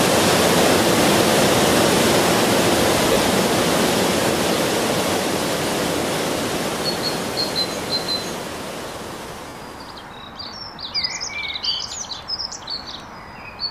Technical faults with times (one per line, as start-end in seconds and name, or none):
3.13-3.16 lost LE Audio frames
9.48-9.55 lost LE Audio frames